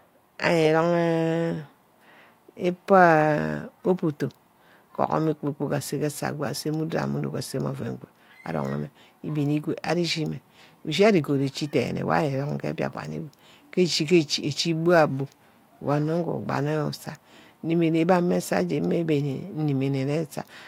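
No technical faults are audible anywhere in the speech recording.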